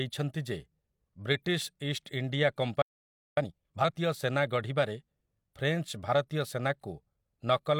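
At 2.82 s the speech cuts out in mid-flow and stays silent for about 0.55 s, until 3.37 s. This is a playback stall: the player likely ran out of data or had its thread blocked, so nothing reached the output until it recovered. Unlike a brief dropout or click, the gap is long enough to register as a pause, and the sound stops abruptly rather than fading.

From 3.37 s to 3.91 s, right before "ସେନା ଗଢ଼ିବାରେ", the speech rushes along at twice normal speed. This is time-compressed catch-up: the player works off its backlog by cutting out small pieces and cross-fading across the joins. What separates it from simple fast playback is that the pitch stays normal. The speech sounds hurried, not higher, and once the backlog is cleared it returns to its normal pace.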